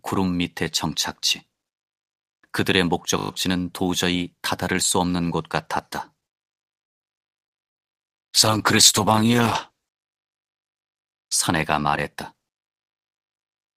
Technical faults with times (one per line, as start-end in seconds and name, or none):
3.18-3.30 system hang loop
7.23-10.37 call bitrate drop
7.48-7.53 short concealed packet loss
7.58-8.58 jitter buffer slow-down
9.12-9.81 jitter buffer slow-down
12.14-13.74 jitter buffer speed-up